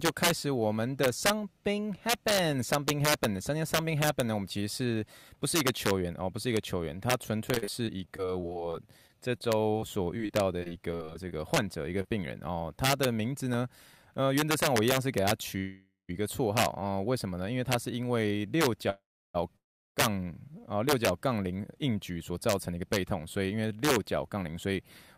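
Throughout the speech, the loudest peaks break into harsh, violent cracks, far sharper than ordinary clipping. This is integer overflow: the signal was driven about 5 dB past the integer limit, and the few samples that exceeded it wrapped to the opposite extreme instead of being held at full scale.

From 7.51 to 11.58 s the speech turns choppy and metallic, with small pieces repeatedly missing. This is repeated packet loss, giving a robotic sound. Twenty-nine separate holes, none longer than 43 ms, were each patched by extending the preceding sound, so about 13% of the stretch is synthetic fill.

Between 11.81 and 13.83 s, eight regular ticks of uneven strength appear, the longest about 1.5 ms. These are CD scratch ticks: once per disc revolution, a blemish destroyed more data than error correction could restore, and the player interpolated or muted the damaged samples.

Within that run, from 12.02 to 12.06 s, there is a brief smear. 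This is short concealed packet loss: 20 ms of audio never arrived, and the receiver continued the previous sound for 26 ms before blending back into the real signal.

At 15.58 to 16.11 s, 18.90 to 19.36 s and 19.56 to 19.98 s, the sound stalls into a fading buzz that drops to silence for roughly 0.1, 0.3 and 0.3 s before resuming where it stopped. Nothing is lost, but each stall inserts a gap of 0.4 to 0.5 s. This is call audio freeze, likely from delayed packets draining the jitter buffer.

From 21.50 to 24.77 s the speech sounds hurried while its pitch stays unchanged, running at 110% speed. This is jitter buffer speed-up: to reduce an excess of buffered audio, the receiver removed short pitch-period slices, about 300 ms in total.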